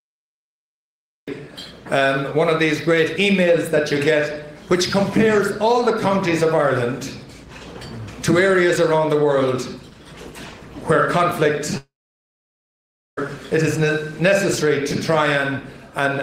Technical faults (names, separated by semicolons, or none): cut-off start; long network dropout